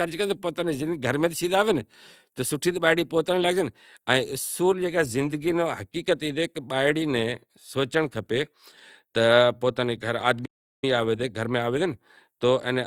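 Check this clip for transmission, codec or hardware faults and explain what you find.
One fault is present: a playback stall. At 10.45 s the speech stops abruptly mid-flow and stays silent for about 0.37 s, resuming at 10.84 s. This is likely the player running out of buffered data, or its thread being blocked, so output falls silent until playback recovers.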